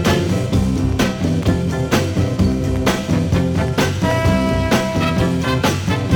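No technical fault can be heard anywhere in the audio. Nothing in the sound calls for a time or a cause to be given.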